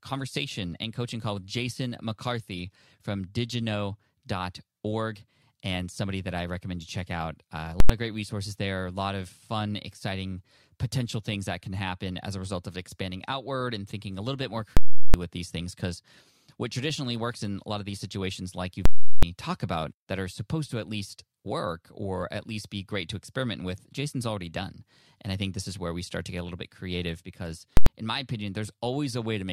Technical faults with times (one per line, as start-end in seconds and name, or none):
7.80-7.89 invalid numbers at full scale
14.77-15.14 invalid numbers at full scale
18.85-19.23 invalid numbers at full scale
27.77-27.86 invalid numbers at full scale